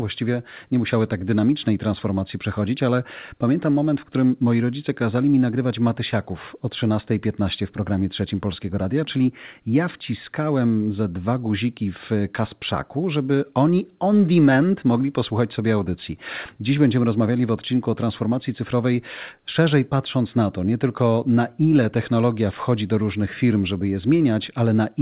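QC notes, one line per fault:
Nothing stood out on listening through this speech recording.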